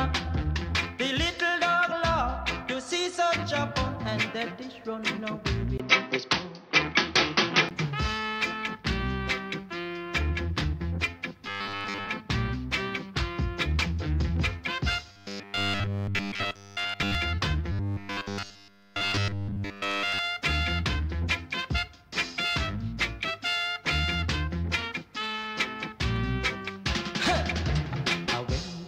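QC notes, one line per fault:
5.78–7.71 s, input switched to a poorer device: the audio abruptly narrows in band, turning dull, after a 20 ms gap. The level shifts by about 5 dB and a new noise floor appears roughly 45 dB down. The likely cause is a change of input device. Unlike a plain filter, this brings its own noise and level.
11.46–12.10 s, 15.12–17.15 s and 17.72–20.19 s, robotic sound from repeated short buffers: a rigid metallic buzz at a fixed 100 Hz appears. This fits a 10 ms chunk being likely looped in place of missing audio. It affects most of the sound in the first burst and all of it in the later two. The constant pitch, regardless of content, sets it apart from jitter or pitch-shifting.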